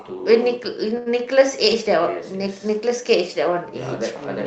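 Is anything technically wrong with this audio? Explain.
Yes. Short stall from a late packet at 0.97 to 1.19 s: the jitter buffer ran empty, so the receiver stretched 87 ms of speech, and a sound drags with a faint buzz or dip.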